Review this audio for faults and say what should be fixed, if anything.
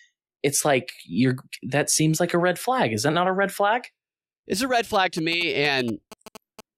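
GSM signalling bursts run from 4.94 to 6.61 s. The audio circuit rectifies a nearby 2G phone's radio pulses into galloping ticks and 217 Hz buzzes about 15 dB below the speech. A spectrogram shows vertical stripes and a 217 Hz harmonic comb; the waveform shows clustered spikes. Keeping phones away from the recording equipment prevents this.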